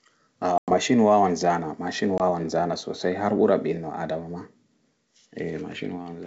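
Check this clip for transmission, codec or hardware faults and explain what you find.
Two dropouts from packet loss on an ADPCM call are audible. The first runs from 0.58 to 0.75 s, about 100 ms of audio gone, consistent with roughly five consecutive packets, just before "wawan zana machine". The second, from 2.18 to 2.21 s, is about 20 ms, consistent with a single packet, between "wawan zana machine" and "zana sosai har ɓura". Each gap is filled with silence and has abrupt edges. Because ADPCM decoding depends on its own running predictor and step size, the missing data leaves the receiver out of step with the sender. Speech resumes with brief, slight distortion before settling within some tens of milliseconds.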